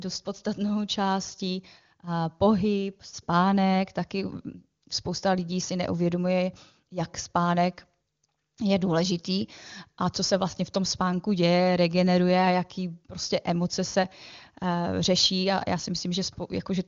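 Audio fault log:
No fault to log for this speech clip.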